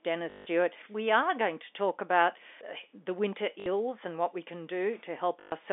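At 0.30–0.46 s, 3.60–3.66 s (after "the winter") and 5.40–5.52 s, packet loss with last packet repeated: missing audio is refilled by looping one 20 ms chunk. It gives a 50 Hz robotic buzz, seen as identical repeating waveform blocks and evenly spaced vertical spectrogram stripes.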